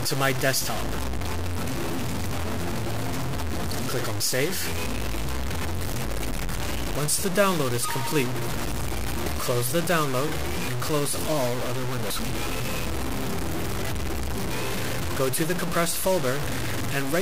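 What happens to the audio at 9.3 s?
At 9.24 to 9.27 s a short burst of damaged data in the compressed stream interrupts the audio. For about 30 ms the decoder receives corrupted frames it cannot parse, loses sync, and skips forward to the next valid frame header. The result is a brief glitch in the sound. The waveform has an abrupt discontinuity where the signal resumes.

That glitch sits on top of a coarse, grainy distortion that runs through the whole clip, including this moment. The texture is most likely low bit depth without dither, consistent with truncation to around 4 bits. The rounding error tracks the signal, so it lands almost at the level of the sound itself. Quieter passages sputter between a few steps or fall to silence. The waveform looks visibly staircased. On a spectrogram, harmonic-like distortion is spread across the band and shifts with the sound.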